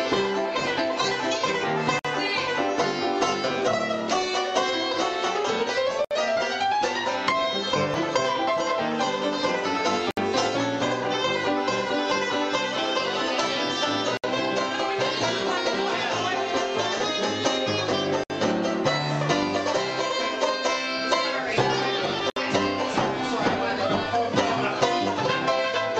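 Gaps at joins of encoded pieces occur at 1.99, 6.05, 10.11, 14.17, 18.24 and 22.30 s, every 4 s. The first lasts 53 ms and the rest 63.5 ms. Separately encoded segments were joined with encoder delay and end padding left in, so the sound drops out briefly and then resumes where it stopped.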